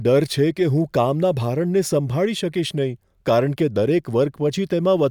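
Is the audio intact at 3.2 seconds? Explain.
Yes, the audio is intact at 3.2 seconds, with no dropout, click, distortion or other fault at that moment.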